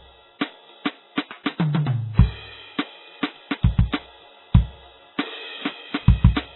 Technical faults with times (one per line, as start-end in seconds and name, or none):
0.00-6.55 MP3 compression